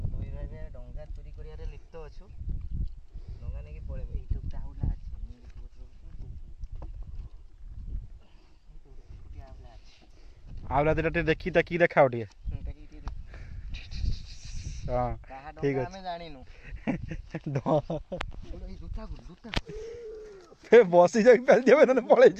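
No technical faults can be heard anywhere in the audio.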